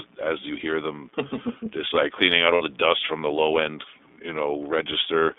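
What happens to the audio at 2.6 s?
At 2.54 to 2.62 s, lost iLBC frames are covered by the decoder replaying the last pitch cycle blended with noise, so the gap sounds like a held, faintly buzzy vowel rather than silence. The missing stretch fits two 30 ms frames. Because each iLBC frame is decoded independently, the voice returns almost at once after, with no smeared recovery.

Around it, the iLBC codec at 13.33 kbps confines the sound to about 250 Hz to 3.6 kHz. The plainly audible roughness is band-limited and synthetic, not the warble of a transform codec.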